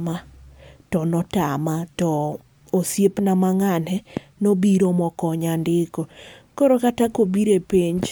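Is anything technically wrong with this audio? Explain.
No, nothing is technically wrong with this audio.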